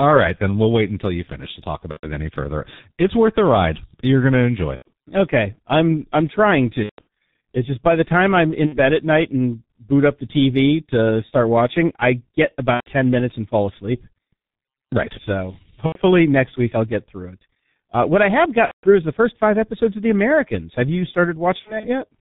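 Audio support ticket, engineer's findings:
G.723.1 codec, throughout: heavy codec damage at 6.3 kbit/s. Speech muffled and hoarse, nothing above 4 kHz, consonants blurred. Slow-updating voice model on 30 ms frames cannot track fast articulation.

VoIP packet loss concealed by the speech codec, at 1.91–2.07, 4.76–4.91, 6.84–7.07, 8.66–8.78, 12.74–12.88, 15.86–16.00, 18.65–18.91 and 21.59–21.89 s: decoder extrapolates last pitch and filter with falling gain, producing a fading buzz or coloured noise. Longer gaps mute, and weak speech follows recovery.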